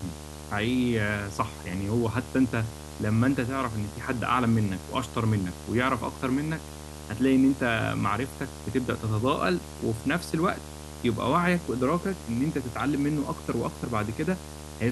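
Video or display buzz runs through the whole clip. A screen or video cable is coupling into the audio path, leaving a buzz at the 75 Hz field rate with hash riding above it. It sits roughly 15 dB under the speech.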